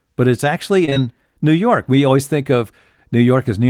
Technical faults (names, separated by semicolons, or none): short concealed packet loss